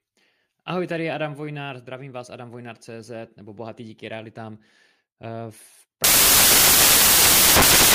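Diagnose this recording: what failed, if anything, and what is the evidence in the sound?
The sample-format conversion failed: from 6.04 s to the end of the clip, the reader assembled each sample from the wrong bytes, either misaligned by a byte or in swapped order. The speech abruptly gives way to loud, harsh broadband noise, because the rapidly fluctuating low-order bits now dominate each sample value. This is the signature of samples built from the wrong bytes.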